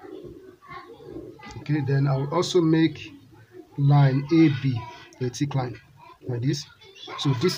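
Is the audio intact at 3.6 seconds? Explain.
Yes, the audio is intact at 3.6 seconds, with nothing there that breaks the continuity of the signal.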